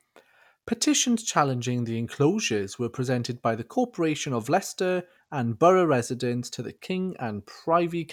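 Nothing goes wrong anywhere in this speech recording; there's no technical fault to point to at any moment.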